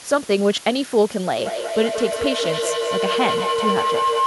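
Low bit depth with dither runs from start to finish. The speech is held to very few bits, and random dither added before rounding turns the error into a steady, even hiss around 20 dB below the signal, a level that fits a 6-bit word, with no distortion.

Feedback howl starts at 1.37 s and lasts to the end at 4.27 s. Two devices on the same call in one room form a loop from microphone to loudspeaker that gains level on every pass, narrowing to a tone around 1 kHz with repeats roughly every fifth of a second that climbs to about 2 dB below the speech.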